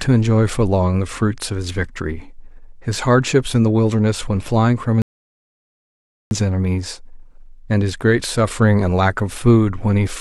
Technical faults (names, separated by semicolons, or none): rebuffering stall